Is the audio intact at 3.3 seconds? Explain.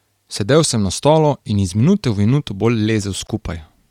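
No. Just after "minute v minuto bolj", at 3.27 s, a block of digital silence drops the speech to silence for 16 ms. The waveform shows a flat line with abrupt edges, and the spectrogram shows a thin vertical gap. Throughout the clip, the speech also carries a plainly audible grainy, breathy edge, likely from Bluetooth LC3 compression, where the upper band is thinned and filled with noise. On a spectrogram that region looks smeared in 10 ms blocks.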